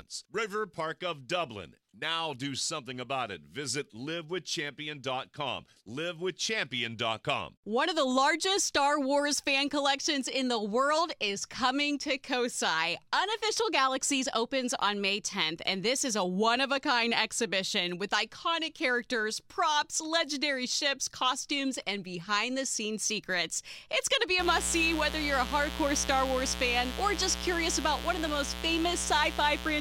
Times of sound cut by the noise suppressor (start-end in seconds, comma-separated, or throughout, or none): none